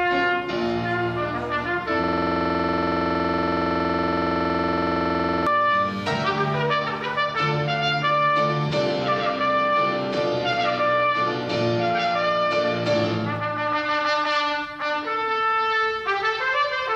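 From 2.04 to 5.47 s the audio locks into a system hang loop: one 46.4 ms fragment, which fits a 2048-sample buffer, repeats 74 times at 21.5 Hz, giving a stutter-buzz. The waveform shows identical repeating blocks, and the spectrogram shows evenly spaced vertical stripes.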